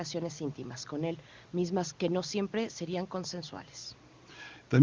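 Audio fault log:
No faults turn up in this speech clip: the call's microphone processing, the room noise sitting about 30 dB under the speech, and the AMR wideband (HD Voice) codec, which sounds like it's running at a high rate of around 24 kbit/s, all come across as they normally would.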